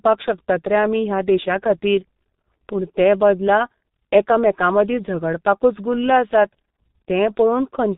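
From start to finish the speech runs through the G.723.1 codec, and it's heavily mangled. Nothing survives above 4 kHz, so it's muffled, and the coarse 30 ms voice model leaves it hoarse with smeared consonants, which fits a bitrate around 6 kbit/s.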